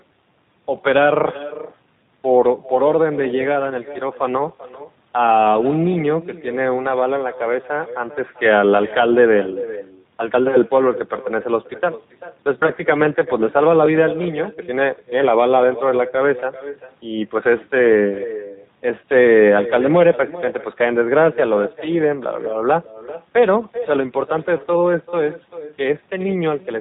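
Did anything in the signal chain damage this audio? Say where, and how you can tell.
Yes. At the call-processing stage there is an echo with no canceller, present throughout the speech. Every phrase is followed around 0.4 s later by a copy about 14 dB quieter and thinner. The far end's loudspeaker is feeding its microphone and nothing subtracts that path. Room reverberation would smear continuously from the first instant. Here the copy arrives as a distinct, delayed repeat after a clean gap, which points to a network round trip rather than an acoustic space.

At the codec stage, G.729 damage is plainly audible across the whole clip. Nothing above 4 kHz survives, and the speech has a rough, slightly synthetic buzz. That buzz comes from being rebuilt from a vocal-tract filter, a pitch predictor and a few pulses per short frame, which fits an 8 kbit/s G.729A coder. A simple low-pass filter would only dull the sound. 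The grainy, modelled texture shows the signal was resynthesised, not merely band-limited.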